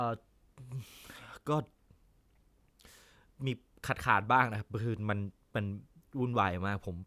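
No technical faults can be heard anywhere in the speech recording.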